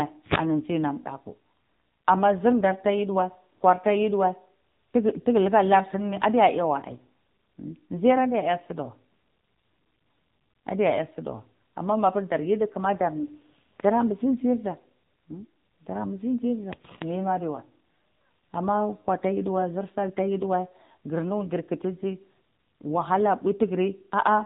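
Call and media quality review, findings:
AMR narrowband mobile codec throughout, low mode, consistent with around 7.4 kbps: nothing above 4 kHz, speech buzzy and synthetic from sparse pulse excitation of the vocal-tract model.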